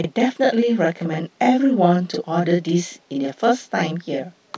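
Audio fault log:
Throughout, channel delay (doubling): one channel lands 40 ms late, and summed to mono the speech picks up a same-level slap right behind itself.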